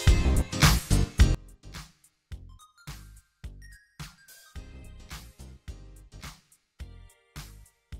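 From 1.35 s to the end, one stereo channel has likely been inverted in polarity, so the shared content cancels in mono and the sound drops about 23 dB.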